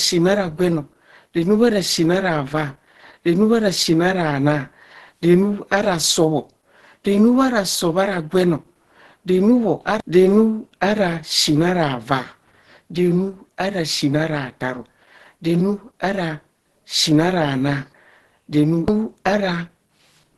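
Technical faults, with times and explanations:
Throughout, Opus compression: the speech sounds muffled and hoarse, with nothing above 12.1 kHz and plainly audible codec damage. The likely cause is the encoder running in its hybrid speech mode at a low rate, fitting roughly 16 kbps, which narrows bandwidth and codes detail coarsely.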